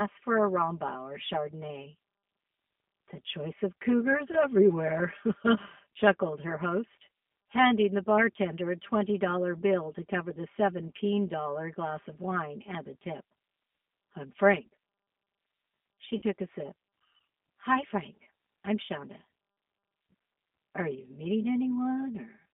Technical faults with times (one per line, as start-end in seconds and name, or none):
0.00-22.54 channel delay (comb filtering)
0.00-22.54 G.729 codec
4.31-4.36 VoIP packet loss concealed by the speech codec
16.18-16.22 VoIP packet loss concealed by the speech codec
18.25 VoIP packet loss concealed by the speech codec